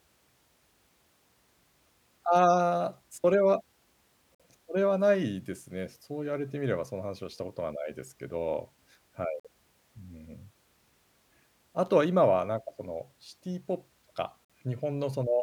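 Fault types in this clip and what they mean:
gap between chunks: the speech drops out for 50 ms at 4.35, 9.40 and 14.45 s, holes 5.05 s apart. The audio was handled in 5-second chunks with silence inserted at each join, so nothing is lost, only interrupted.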